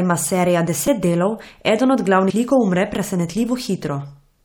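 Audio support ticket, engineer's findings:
Repeated buffer at 0.87 s and 2.75 s. Playback starved, so the output device re-played its last buffer once instead of new data. The result is a single doubled slice of about 5.8 ms, fitting a 256-sample buffer, heard as a brief click/buzz in the speech with a hard join and a few milliseconds of audio lost.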